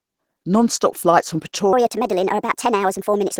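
It's a speech clip, and the whole thing carries plainly audible Opus compression damage, likely from a low-rate encode. The voice sounds hoarse and muffled with a grainy, noisy texture, which fits a rate of about 16 kbps where the encoder runs in its hybrid speech mode while keeping the full bandwidth. Then, right after "flights from" at 1.73 s, there's a section at the wrong speed running to the end of the clip at 3.39 s. It plays 1.36 times too fast, so the voice jumps up about five semitones and sounds rushed. That's most likely a playback or editing clock mismatch on that stretch.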